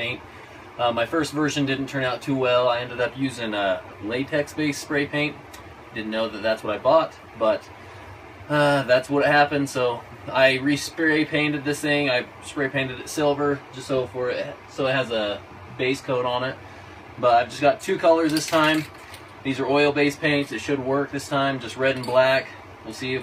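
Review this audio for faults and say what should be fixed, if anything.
Adaptive stream at a lower bitrate, from 13.22 s to the end: quality changes abruptly with no gap, as the player switched to a cheaper rendition. Codec artefacts increase and the treble turns synthetic, which fits a drop from about 96 kbit/s AAC-LC to 32 kbit/s HE-AAC. To prevent it, give the stream enough bandwidth or buffer headroom, or set a higher minimum bitrate for the adaptive ladder.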